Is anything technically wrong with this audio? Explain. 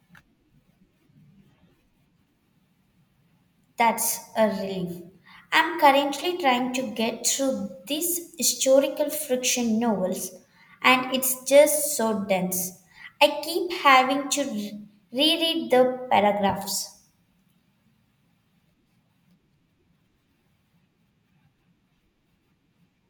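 No, nothing is technically wrong with this speech recording. No fault can be heard anywhere in it.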